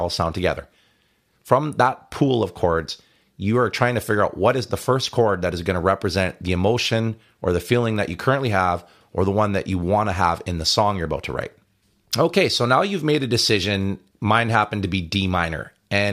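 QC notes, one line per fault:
No faults heard on this speech recording; nothing to flag.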